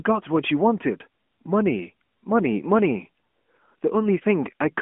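From start to finish the speech goes through an AMR narrowband mobile codec, which fits about 10.2 kbps. Nothing passes above 3.6 kHz. The voice sounds thin, buzzy and synthetic throughout.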